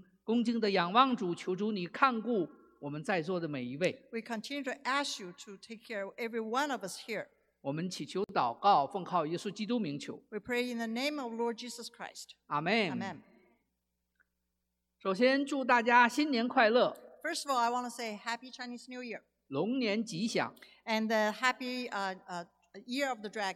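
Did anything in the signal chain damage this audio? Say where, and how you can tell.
Yes, at the codec stage. A gap at a join of encoded pieces opens at 8.24 s, spanning 50 ms. Unremoved encoder delay and padding remain.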